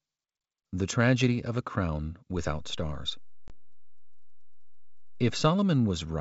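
A hard-edged gap of about 20 ms cuts the speech from 3.48 to 3.50 s, a brief dead hole with an abrupt edge. This is packet loss on an ADPCM call, here a single lost packet on the G.722 wideband stream at 64 kbit/s, filled with silence.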